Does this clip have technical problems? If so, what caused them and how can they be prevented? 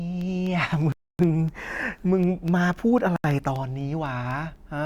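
Yes, there are two. From 0.21 to 4.56 s you get periodic USB or driver dropouts: a tiny tick every 0.25 s, around fifteen in all, each a sliver of roughly a tenth of a millisecond replaced by silence. Something in the background is blocking the USB bus or audio driver on a fixed cycle. To prevent it, find and disable the polling task or power-saving feature hogging the bus, or move the interface to its own USB controller.

Then the speech drops to dead silence twice, from 0.92 to 1.19 s (268 ms) and from 3.16 to 3.24 s (79 ms), before carrying on. That's likely a Bluetooth stall, where interference delayed packets and the headphones' buffer ran dry until the resends arrived. To prevent it, keep the phone close with a clear line of sight and away from busy 2.4 GHz gear, or just use a wired connection.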